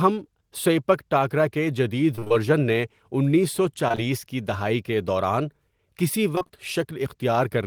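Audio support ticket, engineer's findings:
Repeated packet loss (robotic sound), 2.15–2.32 s. Choppy stretch. Four gaps, about 80 ms missing in total, longest 25 ms. The receiver's concealment extended the last sound into each hole, and about half the span is patched audio. Network jitter or loss upstream of the decoder.

Repeated packet loss (robotic sound), 6.35–6.51 s, right after "دہائی کے دوران کسی". Same choppy sound. Four gaps, about 80 ms lost, longest 26 ms. Concealment covers roughly half the span. Bursty transport loss, with the jitter buffer unable to recover.

Short concealed packet loss, 3.88, 3.92 and 3.95 s, three back-to-back holes between "نے انیس سو" and "کی دہائی کے دوران". Each hole is about 20 ms missing. The decoder continued the prior pitch or noise and blended back in, giving a brief smear or wobble. Likely transient network loss in a single burst.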